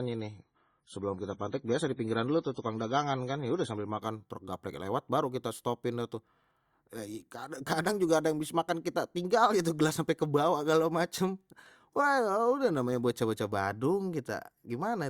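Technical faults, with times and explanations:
0.0 to 4.0 s, adaptive stream starting at a low bitrate: the opening speech is dull, with nothing above about 10.4 kHz, and carries stronger codec smearing and swirl. At 4.0 s, just before "truk gaplek lewat baru", the treble returns and the artefacts drop abruptly, with no gap. The player began on a low-bitrate rendition to start quickly and switched up once it had measured the connection. The sound points to roughly MP3 at 24 kbit/s rising to 128 kbit/s.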